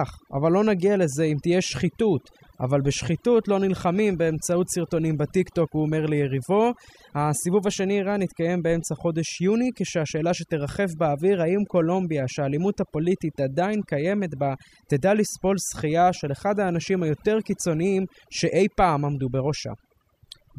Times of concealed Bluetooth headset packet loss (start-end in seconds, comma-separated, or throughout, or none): none